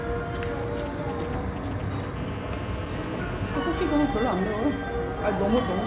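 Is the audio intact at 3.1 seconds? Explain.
No. At 3.1 seconds a hard, raspy buzz at 217 Hz, thick with harmonics and about 15 dB below the sound, runs steadily from 2.16 to 3.58 s. This is GSM phone buzz: a nearby 2G phone on a call transmits radio bursts 217 times a second, and the audio circuitry rectifies them.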